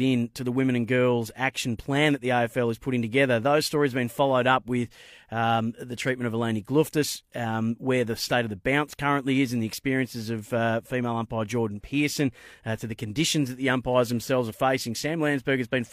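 Speech recording with no technical faults audible anywhere in the signal.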